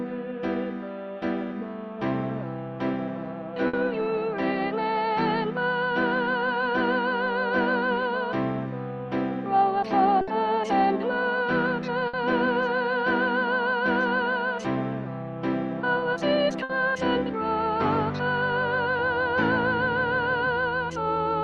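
At 3.67, 10.21, 12.07 and 16.63 s the sound smears into a brief held buzz or fading hiss, then jumps ahead. Each is a burst of packet loss: about 60 ms was lost, bridged by the receiver stretching the last sound as it faded.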